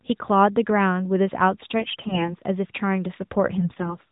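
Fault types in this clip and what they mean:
AMR bit errors: corrupted low-priority frame bits misplace excitation pulses, turning the speech hoarse and gargly from 1.8 to 2.35 s, and more mildly from 3.56 to 3.96 s.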